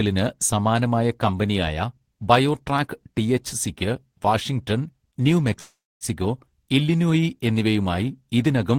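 A call audio freeze runs from 5.59 to 6.04 s. The speech stalls and its last sound is drawn out as a fading buzz that drops into about 260 ms of silence, roughly 414 ms of filler in all. When the speech resumes, it picks up exactly where it stopped, with nothing lost but everything after arriving 414 ms late. This is likely packets held up in transit, leaving the jitter buffer empty until they arrived.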